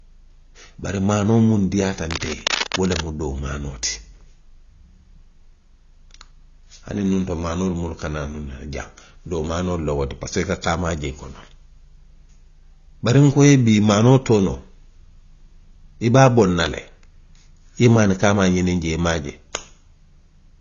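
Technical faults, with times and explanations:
Throughout, AAC compression: the speech sounds dull and smeared, with nothing above about 7.1 kHz and a fizzy, warbling edge on sibilants. That's plainly audible codec damage, and it fits a low-bitrate AAC-LC encode around 24 kbps, where the encoder trims the top end and thins the spectrum.
2.11–3.06 s, cable scratch noise: right after "maanoo muŋ diiyaata" and before "doo maanoo ti", a burst of rough, uneven scratching sits over the speech at roughly 10 dB below it. That's likely a worn cable or connector being moved, its contact resistance jumping around.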